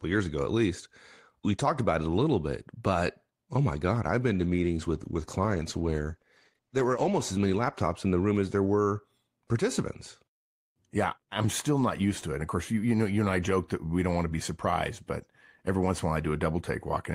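Speech, with a call bitrate drop from 4.34 to 8.51 s: the sound turns coarse and muffled, worst for about 3.1 s, which fits the encoder falling from around 32 to 14 kbps. Unlike packet loss, nothing drops out or stutters; the audio stays continuous but degraded.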